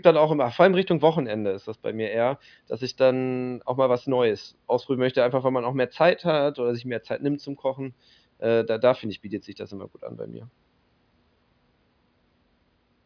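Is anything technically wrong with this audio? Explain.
No, nothing technically wrong can be heard here.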